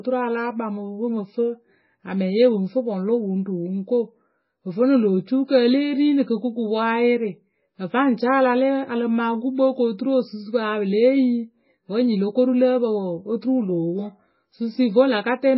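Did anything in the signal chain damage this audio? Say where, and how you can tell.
Yes. The damage sits at the codec stage and runs through the whole speech clip. Nothing is left above 5.6 kHz, so the top end is cut off flat. The sound is watery and swirly, with metallic chirps on s sounds and smeared onsets. The likely cause is heavy MP3 compression at a very low bitrate, around 16 kbps. Starved of bits, the encoder drops the treble at a fixed frequency. It also zeroes weak frequency lines, which flicker on and off between frames.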